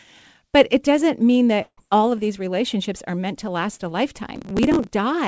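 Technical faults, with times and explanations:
1.62–1.79 s, long network dropout: after "it doesn't mean" the sound smears into a fading buzz, then about 60 ms of near-silence, before resuming at "all of these relationships" with about 160 ms lost, likely from packets that never arrived. Spectrogram: a blurred, decaying band, then a blank gap.
4.36–4.89 s, processor overload crackle: after "meant to last a", gritty tearing rides on the speech as a few dozen tiny buffers of around 2 ms are skipped outright. The waveform shows hard-edged jumps; the spectrogram shows thin vertical streaks reaching the 8 kHz ceiling of the G.722 band.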